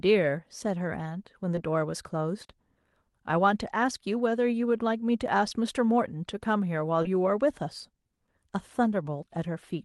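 Brief smears or wobbles in the speech at 1.55–1.59 s, 2.43–2.51 s and 7.03–7.07 s are short concealed packet loss. Audio arrived too late, roughly 20 ms gaps fitting single call frames, and the decoder extended the preceding sound before blending back.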